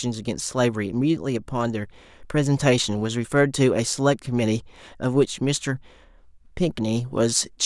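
No technical faults can be heard anywhere in the recording. There are no events to place in time.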